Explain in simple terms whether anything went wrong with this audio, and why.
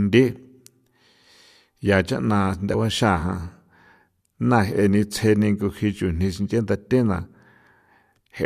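Yes, there are two compressed frames skipped faults. At 2.73 s, after "ya chaꞌna", the speech jumps ahead about 40 ms, and at 7.25 s, after "chujni sinche nda thena", it jumps about 20 ms. Unlike a dropout, nothing goes silent.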